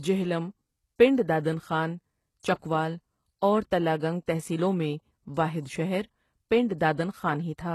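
From start to finish, the treble sounds synthetic. Sibilants turn gritty and lispy, and nothing sits above about 12.3 kHz. This is likely HE-AAC compression at a low bitrate, around 16 kbps.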